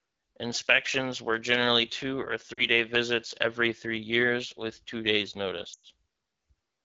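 This is speech carried over the AMR wideband (HD Voice) codec at about 8.85 kbit/s, one of its two lowest rates. Throughout, the voice sounds rough and raspy. The codec models the voice up to 6.4 kHz and fills the top band with shaped noise, and at this rate the damage is plainly audible. There are lost AMR speech frames from 2.53 to 2.66 s, just before "visits every three years". The gap of about 40 ms fits two dropped 20 ms frames. The decoder repeats the last good settings at falling gain, so the sound drops toward near silence. A longer loss runs from 5.73 to 5.86 s, right after "years with two days'". This one is about 100 ms, matching five frames. The sound drops to near silence within two frames, then returns weak or rough.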